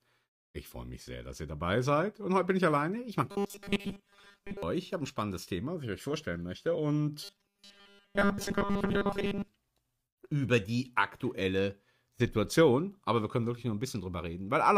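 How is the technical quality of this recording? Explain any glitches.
The recording has one recurring glitch, heard twice. Robotic sound from repeated short buffers appears from 3.30 to 4.63 s and again from 7.24 to 9.48 s. The likely cause is new audio arriving too seldom, so playback fills gaps by looping the most recent tiny slice while most of the real material is dropped. The steady 200 Hz buzz points to slices about 5 ms long, and the sound becomes a rigid, metallic drone that only loosely tracks the original.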